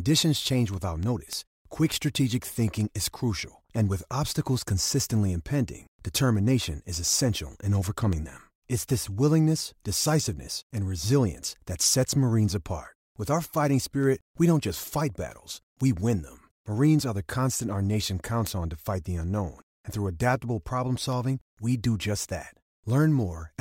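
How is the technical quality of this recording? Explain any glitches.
The recording is marred by one persistent glitch, word clock ticks, running through the speech from 0.15 s to 23.49 s. They come at a steady rate, about every third of a second, around seventy in all. The receiving device is running on its own clock rather than locked to the sender's digital link. Each time the two clocks slip by a sample, one sample is dropped or repeated, producing a sharp tick of varying strength. The spacing points to a clock mismatch of around 70 parts per million. The metronome-like regularity is what separates these ticks from vinyl-style crackle or random dropouts, which scatter unevenly.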